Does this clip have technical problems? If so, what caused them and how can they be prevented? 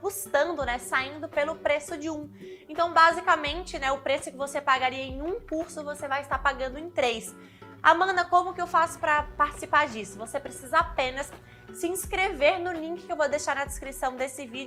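Yes. Switching spikes from the 60 Hz mains supply leaked in, causing a raspy mains buzz from 8.43 to 11.75 s, well below the main sound. Shielded, properly grounded cabling kept away from dimmers and power supplies prevents it.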